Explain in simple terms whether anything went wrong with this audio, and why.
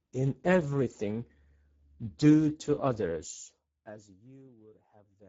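The whole recording was squeezed through the Speex codec, an old internet-call speech format, at a low-ish quality setting. That starves it of detail, so the speech sounds plainly hoarse and noisy throughout, and the top end stops around 7.7 kHz.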